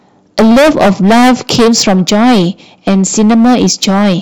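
From the first syllable to the end, the speech is hard clipped. The signal is driven about 18 dB beyond what the stage can pass, so every peak is sliced flat at the ceiling, and roughly a fifth of all samples sit at that limit. Those squared-off tops generate strong high-order harmonics, so instead of occasional crackle the voice carries a constant harsh, buzzy fuzz on every louder syllable.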